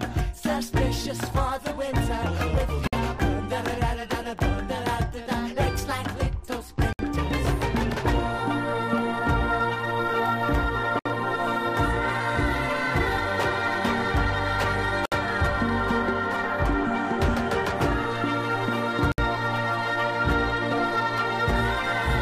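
Gaps at joins of encoded pieces at 2.87, 6.93, 10.99, 15.06 and 19.12 s, every 4 s. These are brief dropouts of 54 to 64 ms, left from untrimmed encoder delay and padding.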